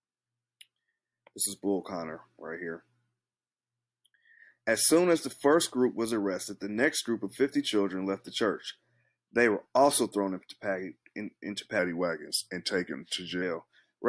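From 11.79 to 13.42 s the audio drags and sinks, a clear case of wrong sample rate. What you're hearing is material captured at one rate being clocked out slower with no conversion, which fits a 24 kHz recording played back at 22 kHz. Speed and pitch fall together, running at about 0.92 times normal and dropping roughly one and a half semitones, so that stretch sounds a touch sluggish and heavy before the clip ends.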